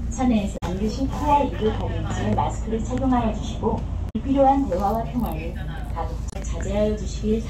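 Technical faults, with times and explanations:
0.54–0.63 s, 4.06–4.16 s and 6.28–6.36 s: damaged data in a compressed stream. The decoder misreads corrupted frames and loses sync until the next header, giving brief garbled bursts or short holes.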